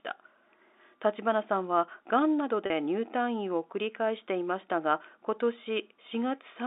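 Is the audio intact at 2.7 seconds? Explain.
No. Packet loss with pitch repetition from 2.66 to 2.70 s drops 40 ms, which fits two packets. The receiver repeats the last pitch period, so the sound is briefly held and buzzy. The waveform shows identical repeated cycles, and the spectrogram shows flat, frozen harmonics.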